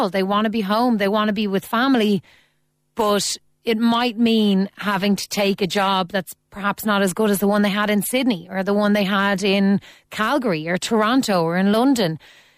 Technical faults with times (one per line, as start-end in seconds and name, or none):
3.95-5.95 adaptive stream at a lower bitrate